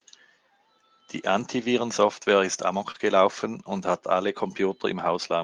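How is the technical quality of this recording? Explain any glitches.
There are two overlapping packet-loss glitches in this speech recording, both packed into about five hundredths of a second just before 3 s.

From 2.91 to 2.96 s there is short concealed packet loss. About 20 ms of audio never reached the decoder in time, so it covered roughly 28 ms by extending the preceding sound, either by repeating its pitch or by generating shaped noise, and then cross-fading back into real audio. You hear this as a quick smear or tiny wobble. On a waveform it looks like a stretch of suspiciously regular, repeated cycles. On a spectrogram it shows up as harmonics frozen flat or as a smooth noise patch, with a soft blend at the end.

From 2.94 to 2.96 s, one lost packet was rebuilt from error correction. The following packet carried a low-bitrate backup copy of it, and the decoder played that copy for about 20 ms, so no gap opens. 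The cost is quality: that brief slice sounds rougher and grainier. On a spectrogram it appears as a short block with blurrier harmonic detail and a raised noise floor. On the waveform the envelope stays continuous, but its fine texture looks coarser.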